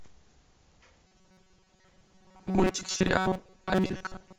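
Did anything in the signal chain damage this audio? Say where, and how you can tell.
Yes, at the buffer stage: from 1.07 s the speech becomes a 188 Hz buzz, robotic sound from repeated short buffers, likely a starved driver looping 5 ms chunks.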